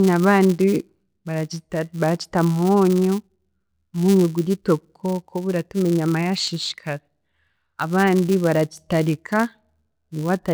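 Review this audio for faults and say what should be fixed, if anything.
There's a steady 200 Hz buzz throughout the speech that rises and falls with level: a filter restarted on every block, its state zeroed every 5 ms. Carry the filter state across blocks instead of reinitialising it each call.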